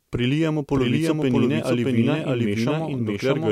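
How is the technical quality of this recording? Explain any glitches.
The recording has one clear fault running throughout: a doubled audio track. Every phrase is followed about 0.7 s later by a full-band copy at roughly equal level, with no decay or room colouring. This is likely a second capture path or misaligned edit layering the same speech twice.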